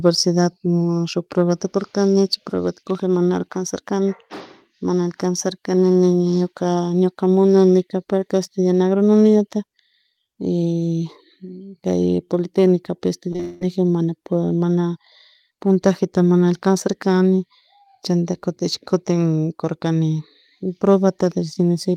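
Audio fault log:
13.31, 13.33–13.35, 13.36–13.40 s: short concealed packet loss. Brief gaps are bridged by extrapolating the preceding sound, heard as small smears.
13.40–13.62 s: likely long network dropout. About 0.21 s is filled by continuing the last sound as a fading buzz or hiss. There is no silence, and the waveform shows a decaying stretch.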